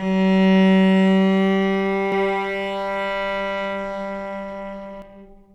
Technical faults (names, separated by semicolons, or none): doubled audio track